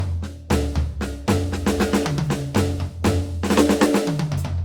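The music carries generation loss throughout. It sounds swirly, smeared and hollow, with blurred attacks, likely from repeated lossy re-encoding, a few passes at around Opus 64 kbit/s. From 1.82 to 1.84 s, a single loud pop cuts in, roughly 10 dB above the music. It is likely a voltage spike, and the music continues underneath.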